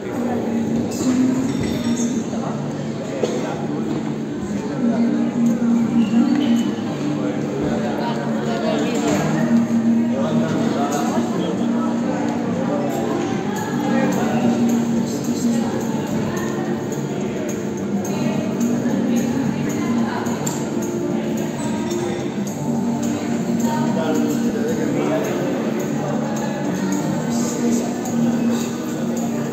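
At 21.58 and 24.50 s, compressed frames are skipped: about one 32 ms frame drops out, leaving a thin vertical discontinuity on the spectrogram.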